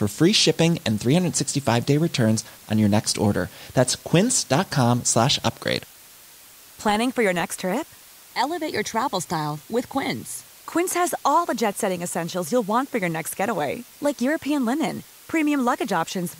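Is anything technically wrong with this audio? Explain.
Yes. Low bit depth with dither runs throughout the speech. Dither added before rounding to a very coarse, roughly 7-bit resolution turns the rounding error into steady white noise, heard as a constant, even hiss about 25 dB below the speech, with no distortion.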